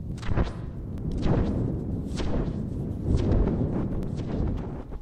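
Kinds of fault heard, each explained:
Bluetooth stutter: The wireless link dropped audio data, and the receiver filled the gap by replaying its last short slice. Here it happens twice, at 0.98 to 1.01 s and at 4.03 to 4.07 s. Each time a slice of about 21 ms repeats once, which fits a single lost packet. It sounds like a brief hitch or tick rather than a long buzz. The sound then picks up slightly further on, as though it had kept playing.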